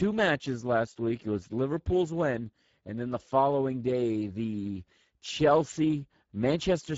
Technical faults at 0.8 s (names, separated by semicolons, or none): Speex codec